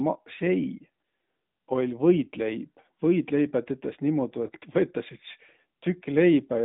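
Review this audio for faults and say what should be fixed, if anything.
The whole recording went through the AMR narrowband mobile codec (AMR-NB), which samples at 8 kHz and rebuilds speech from a vocal-tract model driven by sparse pulses. Nothing above 3.8 kHz survives, and the band sits between 150 Hz and 3.7 kHz. The speech has a plainly audible buzzy, synthetic edge, which fits a mid-rate mode near 10.2 kbps. To prevent this, capture or route the source over a wideband path instead of a narrowband phone link.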